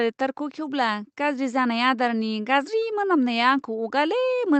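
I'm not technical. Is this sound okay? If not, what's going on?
Yes, this speech sounds fine; nothing is going wrong.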